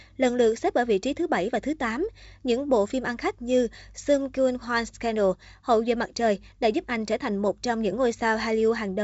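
No faults are present in this speech recording.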